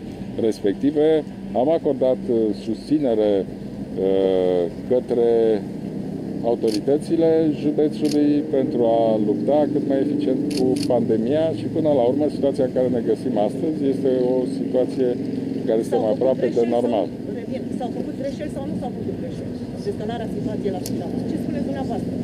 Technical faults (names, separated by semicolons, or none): none